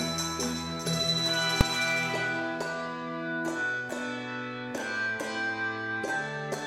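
At 1.61 s there is a single, very loud bang, caused by invalid numbers at full scale. A calculation produced infinite or invalid values, and the output was driven to its maximum positive or negative level for about 3 ms, which fits a 128-sample processing block. Because that block is so short, the jump to full scale and the return merge into one bang. Unlike ordinary clipping, which flattens peaks of a loud signal, this spike ignores the surrounding level entirely.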